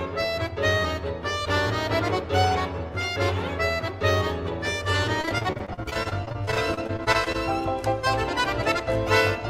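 Repeated packet loss (robotic sound) runs from 5.21 to 7.36 s. Over this stretch the stream keeps losing data in rapid succession, more than two dozen short holes, the longest about 36 ms. Each dropout is patched by stretching out the last bit of sound received, so roughly a quarter of the span is synthetic filler. The audio turns choppy, with fragments missing between the repeated patches.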